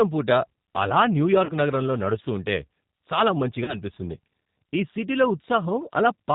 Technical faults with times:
0.00-6.34 G.729 codec
1.45-1.53 VoIP packet loss concealed by the speech codec
3.64-3.78 VoIP packet loss concealed by the speech codec

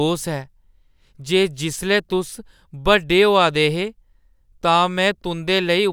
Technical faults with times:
none

